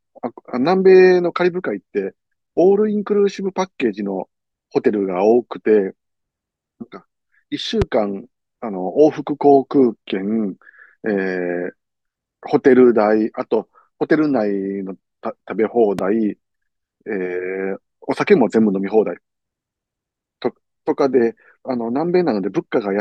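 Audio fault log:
7.82–7.84 s and 15.99–16.01 s, loud pop: a single sharp pop about 10 dB above the speech, likely a voltage pulse. It shows as a tall waveform spike and a full-height vertical spectrogram line while the speech continues underneath.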